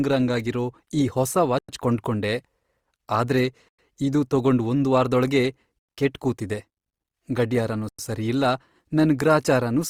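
Throughout, the speech sounds grainy and rough, with noise filling bands. This is likely Opus compression in music mode at around 24 kbps. A spectrogram shows mottled, noisy bands reaching 20.2 kHz.

A gap between chunks cuts in at 1.59, 3.69, 5.79 and 7.89 s. Each is a 100 ms silence, one after every 2 s chunk. The one at 3.69 s comes just before "ಇದು ತಗೊಂಡ್ ಒಂದ್ ವಾರ್ದೊಳಗೇ", the one at 5.79 s sits between that and "ಕೆಟ್ ಕೂತಿದೆ", and the one at 7.89 s comes just before "ಸರಿಯಿಲ್ಲ ನನ್". The waveform shows flat, near-silent stretches and the spectrogram shows blank vertical stripes.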